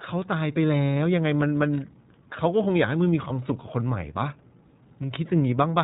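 The whole clip is speech run through the iLBC codec, and the damage is plainly audible. Everything above 4 kHz is gone, and the voice has that slightly rough, synthetic edge you get when each short frame's excitation is coded on its own, which fits iLBC's 20 ms mode.

At 3.28 to 3.32 s there are lost iLBC frames. The decoder covers the gap by repeating the last pitch cycle with some noise, so you hear a brief held, faintly buzzy vowel for about 20 ms, which fits a single dropped frame. Because iLBC frames don't depend on each other, the voice snaps back right after.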